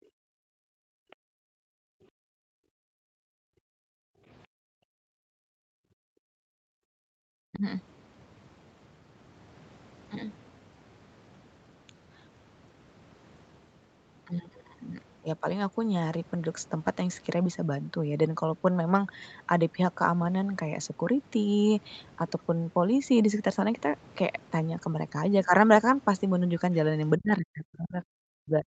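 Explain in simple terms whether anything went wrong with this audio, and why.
Background gated by the echo canceller, from 0 to 2.14 s, 2.8 to 4.26 s and 4.47 to 7.09 s: while the call's loudspeaker was playing, the echo canceller turned the microphone down very hard. The room sound sinks almost to silence, then returns when the canceller relaxes.

Other side's voice leaking through, at 1.10 to 1.16 s: a brief, faint scrap of another voice slips in. Likely, the far side's audio played from the loudspeaker, and the echo canceller didn't fully remove it from the microphone.

Speech suppressed in double talk, at 2.42 to 2.52 s, 7.37 to 7.64 s, and from 27.18 s to the end: the talker's voice drops sharply or cuts out in pieces. Both sides were likely talking at once, so the canceller couldn't separate them and turned everything down.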